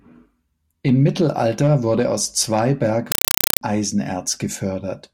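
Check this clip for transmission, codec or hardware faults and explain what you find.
One fault is present: a compressed stream played as audio, from 3.12 to 3.61 s, just after "wurde aus zwei". For that half second the speech is replaced by very loud, chattering static. An encoded Dolby Digital (AC-3) stream has been treated as ordinary PCM samples instead of being decoded. Each data frame plays as a 4 ms burst of noise followed by zero padding, repeating 31.25 times a second. The burst density points to a stream of around 192 kbps.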